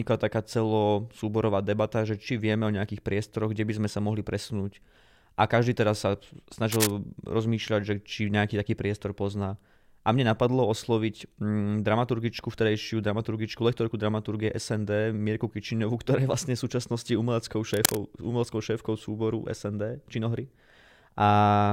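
A brief burst of harsh scratching and rustling cuts across the speech from 6.71 to 6.91 s, then again from 17.74 to 17.97 s, each lasting about a fifth of a second and roughly as loud as the speech itself. This is cable scratch noise, likely from a worn cable, connector or control being moved, so that its contact resistance jumps about rapidly and injects dense, irregular noise into the signal.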